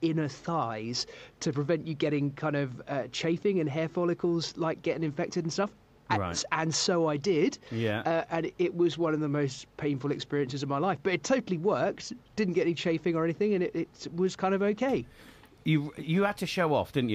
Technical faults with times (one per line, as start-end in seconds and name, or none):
none